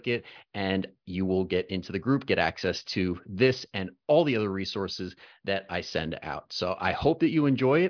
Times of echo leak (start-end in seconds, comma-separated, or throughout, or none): none